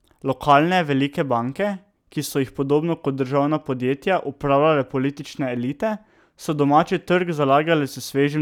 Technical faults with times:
none

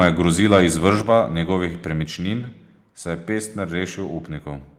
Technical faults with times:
0.54-0.61 microphone overload
1.02 microphone volume stepped down
2.04 microphone volume stepped down

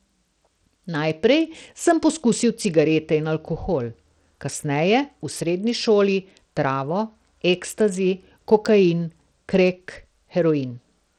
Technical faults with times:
0.00-11.18 Bluetooth SBC compression

